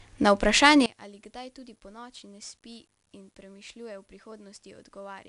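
The whole clip is coded with 4-bit ADPCM compression: each sample is stored as a small step from a predicted value, with the step size adapting as the signal changes. At 88 kbps, which fits a sample rate near 22 kHz, the bandwidth stops at about 10.6 kHz and the speech sounds dull at the top. The coding error is plainly audible as a gritty hiss that rises and falls with the speech, roughening its louder stretches.

At 0.86 s there is a sudden gain jump. The digital level was likely switched from one sample to the next with no ramp. From there to the end, the speech drops by about 23 dB at once. The ADPCM grit and any background drop with it, so the remainder of the clip sounds much quieter rather than fading down gradually.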